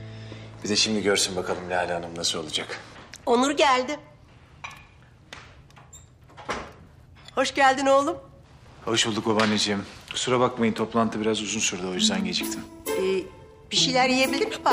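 Nothing here stands out as a technical fault; the audio just runs along without any glitch worth pointing to.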